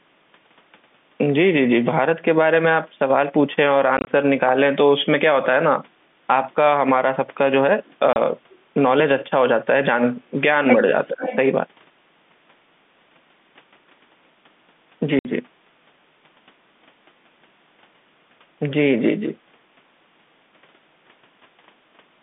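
Telephone speech, passed through G.711 coding with a band of about 150 Hz to 3.6 kHz, is broken by packet loss filled with silence. At 3.97 to 4.07 s, 70 ms of sound drops out in short runs of up to 20 ms. Further gaps follow at 8.13 to 8.16 s (30 ms) and 15.19 to 15.25 s (60 ms). The hard-edged holes, sized in steps that fit 10 ms packets, are unlike a smooth fade or a level dip. A delayed copy of the talker, about half a second late, appears faintly at 7.85 to 7.94 s and much more strongly at 11.04 to 11.36 s. That copy is likely an echo leak from a far-end loudspeaker. It is a repeat of earlier sound rather than room reverberation, which would trail directly off each syllable. Inside that stretch, from 11.09 to 11.24 s, the talker's own level sinks by around 20 dB for about 150 ms. This is likely speech suppressed in double talk as the echo canceller reacts. It differs from packet loss because the sound is turned down rather than cut to silence, with no clicks.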